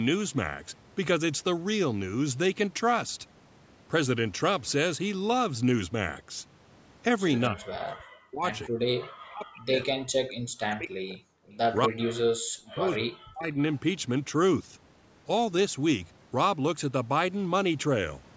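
From 7.49 to 8.47 s the speech drops hard, by something like 40 dB at its deepest, and it sounds like speech suppressed in double talk. That's likely the echo canceller hearing both sides at once and turning everything down rather than risk passing echo. Right after that, from 8.62 to 8.69 s, a faint scrap of echo leak slips through, around 25 dB under the speech and trailing it by 251 ms, most likely loudspeaker pickup the canceller didn't fully remove.

The suppression then keeps coming back: a short gap at 8.68 to 8.78 s, a long stretch from 8.98 to 11.28 s, and another from 11.86 to 13.5 s, each pulling the level down by roughly 40 dB. The same double-talk gating is likely behind all of these. The call's microphone path limits the top end to 8 kHz, which is normal for this kind of processing.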